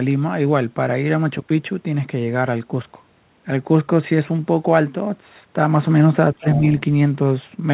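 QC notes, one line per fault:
6.35–6.46 s, speech suppressed in double talk: the talker's level dips sharply, by roughly 20 dB at its deepest, across about 70 ms in total. This is likely an echo canceller turning everything down when both sides spoke at once. Unlike a packet-loss dropout, it lines up with the far side talking.
6.52–6.59 s, other side's voice leaking through: a brief second voice appears in the background, about 15 dB below the talker, lasting roughly 70 ms. This is likely far-end audio from a loudspeaker that the echo canceller did not fully remove. It differs from room reverberation or the talker's own echo because it is a different voice rather than a delayed smear of the talker. It arrives just after the suppressed stretch.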